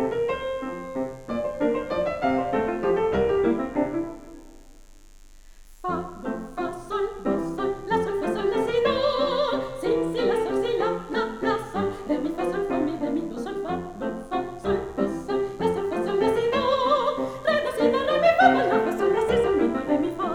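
A steady, raspy buzz runs through the whole clip at about 35 dB below the signal. This is mains buzz from 50 Hz interference, with sharp switching spikes spraying harmonics up into the kilohertz range.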